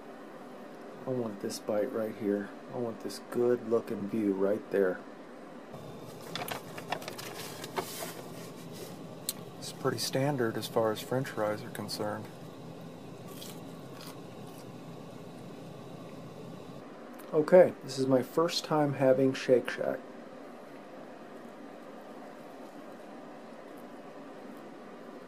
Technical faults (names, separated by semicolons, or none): none